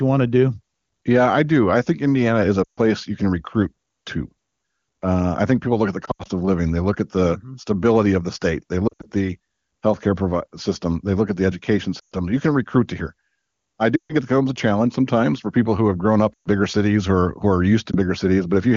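Lost AMR speech frames occur at 2.63 s (after "is a"), 6.05, 8.87, 11.99, 13.95 s (before "it becomes a challenge"), 16.34 and 17.91 s (after "who are"). Frames that fail their check make the decoder keep reusing the last pitch and vocal-tract settings while lowering the gain. Gaps of about 60 to 140 ms therefore drop to near silence within two frames, and the voice comes back weak or rough for a moment. The last one is a single 20 ms dip.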